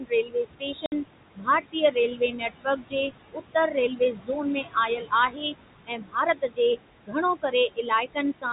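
It's a speech clip over a telephone-band path, with room noise sitting about 11 dB under the talker. There are noise suppressor artifacts running the whole way through. The suppressor pulls the steady background down by about 20 dB, frame by frame, so the noise ducks away in the pauses and swells back up under the speech. There is also speech cut by the noise suppressor, where it mistakes parts of the voice for noise and turns them down along with it. From the start to 4.3 s, something like a second and a half of speech gets swallowed, with dips reaching about 21 dB. It happens again from 4.62 to 5.54 s (about 17 dB, roughly half a second affected), from 5.86 to 6.59 s (about 20 dB), and from 7.03 to 8.45 s (about 22 dB). Soft consonants and word tails in those stretches just go faint. There's also packet loss filled with silence from 0.86 to 0.92 s. That's a 60 ms hole with hard edges where the receiver had nothing to play, which fits three lost 20 ms packets. 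The 4 kHz ceiling of the G.711 coding is audible across the whole clip too.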